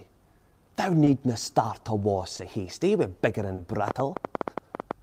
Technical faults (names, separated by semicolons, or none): clock drift between sender and receiver; short stall from a late packet; train of clicks